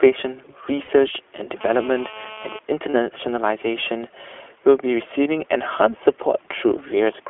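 Throughout, the speech sounds band-limited, slightly rough and synthetic, with nothing above about 3.4 kHz; this is the iLBC codec, narrowband coding of each 20 ms frame with plainly audible damage.

At 0.82 to 0.89 s comes a brief held, buzzy vowel, about 60 ms long, which fits three lost iLBC frames. The decoder repeats the last pitch cycle with noise, then recovers at once.

From 1.61 to 2.59 s a hard, raspy buzz at 217 Hz, rich in harmonics and about 18 dB below the speech, stays steady. This is GSM phone buzz, a nearby handset in a call whose bursts are rectified by the audio circuit.

Lost iLBC frames recur at 2.90 to 2.94 s, a 40 ms held buzz, and at 5.24 to 5.27 s, a 20 ms smear concealed the same way.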